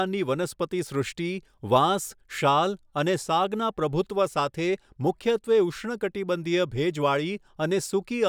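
No technical faults can be heard anywhere in the recording, and the speech signal stays steady and continuous throughout.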